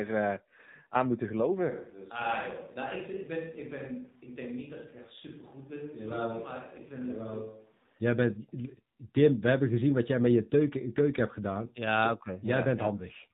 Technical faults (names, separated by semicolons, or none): AMR narrowband mobile codec; switch to a distant microphone